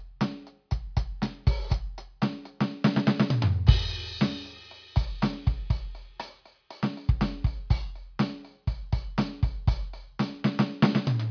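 There are no technical faults to describe in this music, at any point in time.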